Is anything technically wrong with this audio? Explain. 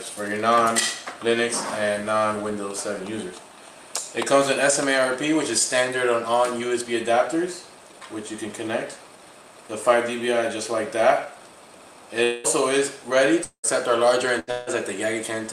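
Yes, there are four gaps near the end of the clip.

From 12.23 to 12.47 s, 13.44 to 13.66 s and 14.51 to 14.70 s, the sound turns into a fading buzz or hiss, then resumes with about 200 ms, 200 ms and 160 ms missing; the second gap ends in roughly 100 ms of silence. A long network dropout is the likely cause, with the receiver extending the last sound until audio returned.

From 14.39 to 14.50 s, a burst of packet loss removes about 80 ms. The receiver holds and fades the preceding sound across the gap before playback jumps ahead.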